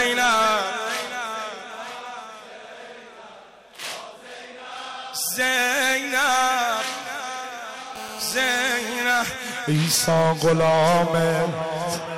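From 7.96 to 9.05 s, a GSM phone buzz sits over the sound. A nearby 2G phone on a call is transmitting bursts about 217 times a second. The audio circuit rectifies them. The result is a hard, raspy 217 Hz buzz, rich in harmonics, about 14 dB below the signal.

From 9.1 to 10.87 s, GSM signalling bursts take over. A nearby 2G phone is on a call, but its user has gone silent, so it sends only short groups of bursts. These rectified pulses form faint, even ticks with a longer 217 Hz buzz twice a second.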